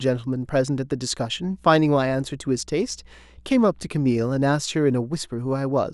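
From 1.33 s to 4.6 s a steady low tone sits under the speech: mains hum at 60 Hz, power-line current leaking in through a ground loop or nearby transformer, roughly 30 dB below the speech. Its fixed pitch and constant level separate it from rumble or wind noise.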